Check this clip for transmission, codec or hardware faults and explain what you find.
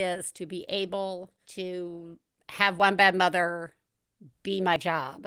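Two brief skips are audible in the speech: at 2.80 s, between "be able to have" and "bad mother", and at 4.76 s. Each is an abrupt jump in the sound with no silence, losing about 10 ms and about 40 ms. The likely cause is a dropped buffer (overrun): the hardware overwrote samples before they were collected, so the audio on either side was spliced together. The Opus voice compression beneath adds only light coding softness.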